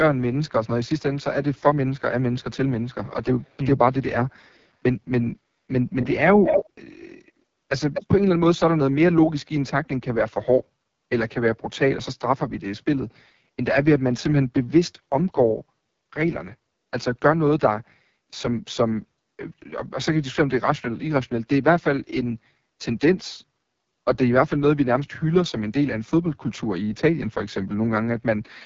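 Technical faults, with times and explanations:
Throughout, AMR wideband (HD Voice) codec: the speech sounds rough and raspy, with nothing above 7.4 kHz. That damage points to the 6.6 kbit/s mode, the lowest rate, where the pulse-driven vocal tract model gets too few bits to shape each sound cleanly.
0.48–0.89 s, 5.94–7.32 s and 7.93–8.07 s, echo leak: a delayed copy of the voice trails about a quarter second behind. It is barely audible at first, as loud as the speech itself at 5.94–7.32 s, and slightly quieter at 7.93 s. This is likely a loudspeaker's sound slipping past one side's echo canceller.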